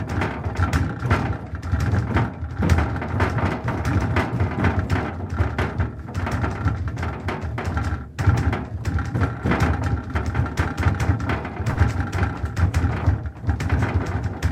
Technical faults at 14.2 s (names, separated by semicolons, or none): none